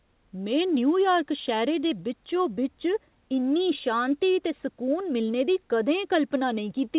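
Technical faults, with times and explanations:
Nothing stood out on listening to this speech recording beyond the narrowed telephone-style bandwidth of the call path, with no content above about 4 kHz.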